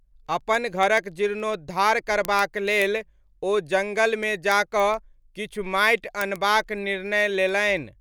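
A speech clip with word clock ticks running almost the whole way through, from about 0.12 s to 7.91 s. There's a sharp tick roughly every 0.15 s, somewhere around fifty in all, at a steady pace. That pattern fits a digital link read by a device on its own free-running clock, with the two clocks drifting apart by something like 150 ppm. Every time they slip past each other, a single sample gets dropped or doubled, and you hear a tick.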